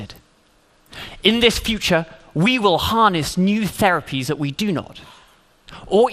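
From start to finish the sound is dull and carries a gurgling, granular roughness, which likely comes from MP2 compression at a low bitrate, consistent with about 80 kbps. Upper sub-bands drop in and out and the rest are coarsely quantised. That flickering band structure sets it apart from the steadier smearing of a simple low-pass or the pre-echo typical of MP3.

At 4.23 s a single sharp click stands out, likely from dropped samples, where about one sample is missing and the waveform jumps straight to a later value. Because the gap is only a fraction of a millisecond, no sound goes missing. That separates it from a dropout or stutter, which would leave an audible hole.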